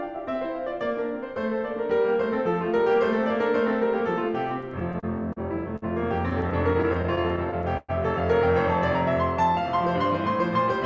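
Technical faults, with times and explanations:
4.62–5.38 s, repeated stalls (stutter): the music keeps catching for a moment, in six short hitches over this stretch, about 106 ms held in all, the longest around 38 ms. Packets were turning up late or slower than playback, so the jitter buffer kept running dry, and each time the receiver just extended the last bit of sound until data came in. Nothing's actually lost, but about 14% of the stretch is filler, so the flow drags and stutters.
5.76 s, short stall from a late packet: one packet showed up about 55 ms late, the buffer emptied, and the receiver stretched the last sound to cover the wait, roughly 55 ms of fill, then picked up exactly where it left off. So you get a single sustained moment held a touch too long, with a faint buzz or dip where the stretched sound sits, but nothing skipped.
6.30–7.91 s, repeated stalls (stutter): same thing again, only longer and rougher, with thirteen hitches adding up to about 245 ms of fill, around 15% of the span. 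Late packets kept draining the jitter buffer, and the receiver kept continuing the last sound until the next packet arrived. The longest wait was about 112 ms, long enough that the held sound fades a little before the music carries on, so it really lurches there.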